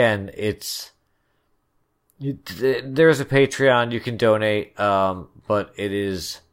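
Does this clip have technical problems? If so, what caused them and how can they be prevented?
No, there are no technical problems to point to in this speech clip. Since nothing has gone wrong, there is no cause to trace and nothing that needs preventing.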